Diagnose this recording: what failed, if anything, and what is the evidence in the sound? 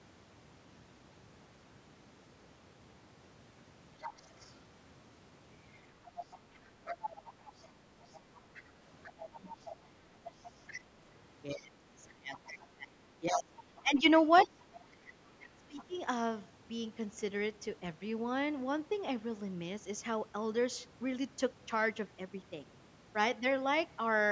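Other side's voice leaking through, call processing: a faint second voice, about 15 to 25 dB down, at 4.01–4.55, 5.72–10.81, 12.37–12.66, 13.8 and 14.36–15.84 s, likely loudspeaker echo the canceller left behind.

Speech suppressed in double talk, same stage: the talker drops by about 20 to 30 dB at 9.33–9.67, 11.54–14.6 and 15.56–15.95 s, likely because the canceller attenuated both voices during overlap.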